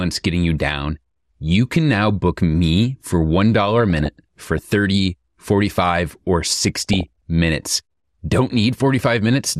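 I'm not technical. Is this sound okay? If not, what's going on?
No. The whole recording sounds dull and plainly gurgly, with a grainy edge, likely from MP2 compression squeezing it too hard, as low-quality digital radio does. From 3.76 to 4.73 s, right after "now book me for", and again from 6.64 to 7.08 s, there is DAB burbling: short blips of noise from reception errors, unlike the steady dullness everywhere else.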